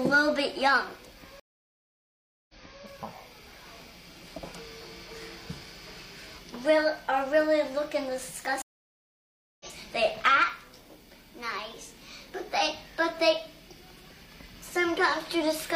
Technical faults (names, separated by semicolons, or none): stream reconnect